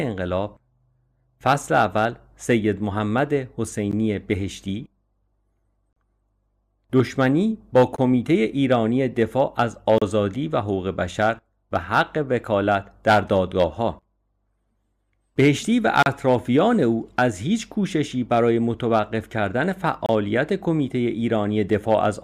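Gaps between stream segments cut into the speech at 3.91 s, 5.93–5.96 s, 7.96–7.98 s, 9.98–10.02 s, 14.02 s, 16.03–16.06 s and 20.06–20.09 s, following the 2-second segment boundaries. Adjacent segments' time stamps leave a small hole, and the player fills it with silence lasting 9 to 35 ms. No audio is lost. Each gap sounds like a sharp dropout. On a waveform it appears as a flat, near-silent stretch with abrupt edges, and on a spectrogram as a thin, near-blank vertical stripe.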